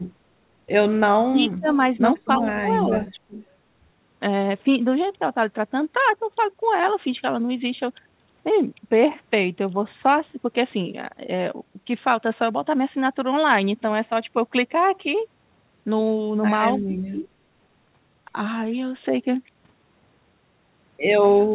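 Between 1.28 and 3.37 s the speech dips and breaks up in pieces, at 1.28–1.67, 2.38–2.47, 2.81–2.93 and 3.13–3.37 s, and again at 16.79–17.23 s, with the deepest drops about 25 dB. This is speech suppressed in double talk, likely because the echo canceller, hearing both sides at once, turned everything down. Interleaved at 2.51–2.55, 2.99–3.12 and 17.23–17.28 s are faint scraps of the voice repeated 294 ms late, about 20 to 30 dB down. That is echo leak, likely where loudspeaker pickup slipped past cancellation and was sent back.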